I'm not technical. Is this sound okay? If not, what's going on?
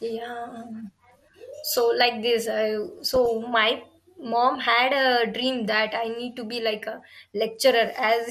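No, it isn't. The whole clip sounds a bit dull and muddy, with a plainly audible gurgling, grainy edge on the speech. That's most likely MP2 compression: the audio was squeezed hard, so the crisp top end gets dropped and what's left sounds rough.

Between 3.09 and 3.28 s there's a short burst of DAB burbling, a brief splutter over the speech. That comes from a weak digital radio signal: a few scrambled bits slip through and briefly throw parts of the sound out of balance.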